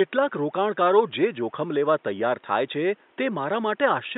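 Nothing is technically wrong in this speech clip; the only background sound is room noise sitting about 38 dB below the speech.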